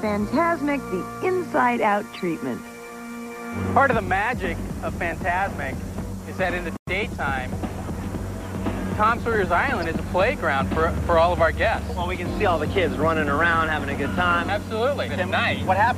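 Two short glitches break through the audio, the first from 2.14 to 2.19 s and the second a brief one at 9.82 s, each standing out at around -25 dBFS. These are corrupt frames that were decoded anyway. Flipped bits in the compressed data made the decoder misread gains or codes and place energy at the wrong frequencies. The first burst spans what sounds like a couple of damaged frames, and the second sounds like a single frame.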